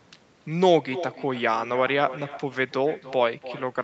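Right through the speech there's echo with no canceller: a thinner copy trails each phrase by roughly a third of a second, about 15 dB down, from the far end's loudspeaker.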